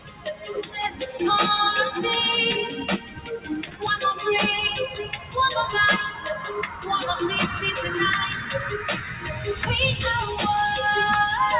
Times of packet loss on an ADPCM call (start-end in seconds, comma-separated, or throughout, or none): none